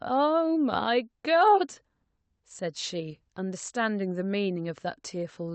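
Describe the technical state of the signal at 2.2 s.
At 2.2 s the speech signal is intact, with nothing beyond the ordinary character of the call path it travelled through.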